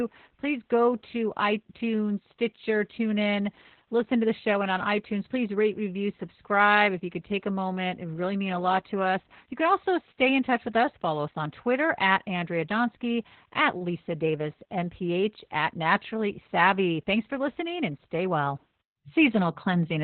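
Speech coded with heavy Opus voice compression in narrowband SILK mode, consistent with about 8 kbps, throughout: band capped near 4 kHz, sounding muffled, hoarse and slightly robotic.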